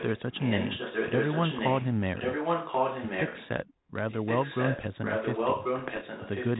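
It's a speech clip with two kinds of trouble. The big one is an echo leak. A delayed copy of the talker comes back roughly 1.09 s late, from 0.0 to 1.88 s, again from 2.15 to 3.48 s, and from 4.09 s to the end. In the first stretch it sits a bit under the direct speech, and in the later two it's about as loud as the speech itself. That pattern likely comes from a far end on speakerphone whose echo canceller isn't catching what its mic picks up, so what gets through is sent back. On top of that, bit errors on an ADPCM link show up from 5.79 to 6.03 s as pops and rough, crackly bursts with quick level jumps. The error rate sounds like something around half a percent, and each hit throws the decoder's step size and prediction off, so the damage rings on for a few milliseconds instead of being a clean click. The link carrying it, G.726 at 32 kbit/s, adds only light coding grain.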